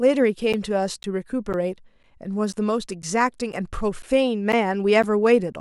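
From 0.53 s to 5.54 s, something repeatedly stalls the USB link or audio driver at a steady 0.5 s interval, producing periodic USB or driver dropouts. About ten times, roughly 10 ms of the speech is lost and replaced with silence. Each gap breaks the waveform abruptly, so the listener hears a regular tick or small pop twice a second, heard only while the speech is sounding.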